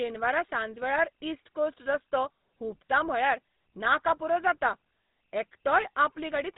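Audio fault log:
Throughout, GSM full-rate codec: the speech has that buzzy, gravelly grit you get when the voice is rebuilt from a vocal-tract model fed by evenly spaced pulses instead of the real excitation, and here the damage is plainly audible. The top end is gone too, with nothing above about 3.8 kHz, so it sounds boxed-in and phone-like. That roughness and ceiling fit the old 13 kbps full-rate coder.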